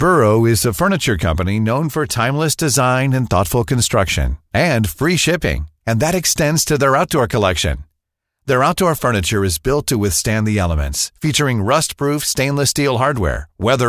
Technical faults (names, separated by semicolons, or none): none